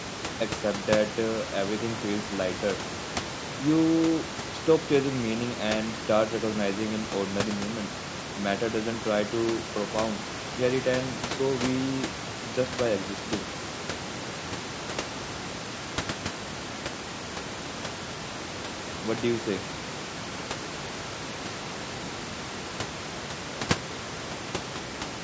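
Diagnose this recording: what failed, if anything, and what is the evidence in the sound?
Nothing has actually gone wrong here: the speech carries the ordinary call microphone processing, with the lowest bass trimmed and nothing above 8 kHz, and the room noise sitting about 12 dB under the speech is simply the space the microphone was in.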